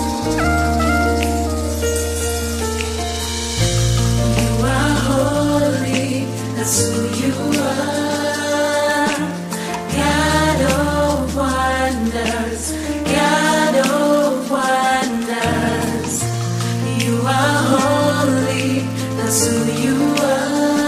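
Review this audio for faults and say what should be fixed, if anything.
A filter restarted on every block runs through the whole clip as a buzz at about 188 Hz that rises and falls with the level of the audio. The filter loses its stored state at each block boundary and starts again from silence, which fits a 256-sample buffer. On a waveform, a small transient sits at every boundary. On a spectrogram, these show as faint vertical lines evenly spaced, with harmonics of 188 Hz stacked above them. To prevent it, keep the filter's state variables from one block to the next instead of resetting them each time.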